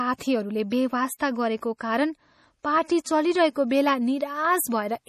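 Throughout the speech the treble stops sharply at 15 kHz, and the sound has a watery, swirling quality with plainly audible damage, likely MP3 compression at a low bitrate around 40 kbps. The encoder cut the top band and dropped weak frequency lines that flicker between frames.

Pre-echo appears from 1.18 to 1.20 s and again from 3.04 to 3.06 s, just after "कारण पार्टी". Each time, quantisation noise spread across a transform block lands before a sharp onset, so a short hiss of about 20 ms precedes the attack and softens it.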